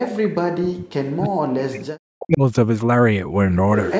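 From 0.0 to 0.67 s and again from 1.14 to 2.42 s, the speech sinks sharply, by around 40 dB at its deepest. This is likely speech suppressed in double talk. The echo canceller mistook the talker for echo while both sides spoke.

From 3.78 s to the end, a faint delayed copy of the speech trails in, 345 ms late and roughly 15 dB below the talker. This is likely an echo leak. The canceller on the loudspeaker side let some loudspeaker sound through.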